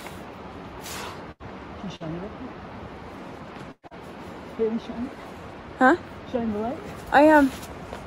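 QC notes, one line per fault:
1.31–1.43 s, burst of packet loss: about 80 ms of audio failed to arrive in time, and the receiver stretched the last sound across roughly 83 ms, fading it as it went. The result is a brief held buzz or hiss, after which the audio picks up further along with that stretch missing.
1.96–2.03 s, short concealed packet loss: about 40 ms went missing and was covered by roughly 44 ms of continued sound, then blended back into the real signal, leaving a quick smear or wobble. Around 6 ms of the original also drops out at the join, so a short sound there can be clipped away.
3.72–3.86 s, burst of packet loss: a longer gap, about 120 ms lost, patched with roughly 117 ms of extended, decaying sound that runs out into about 50 ms of silence before the audio returns further on. It is heard as a fading buzz or hiss collapsing into a hole.
3.87–3.94 s, short concealed packet loss: immediately after that burst, another 40 ms fails to arrive and is filled with about 38 ms of continued sound, adding a second brief smear as the signal recovers.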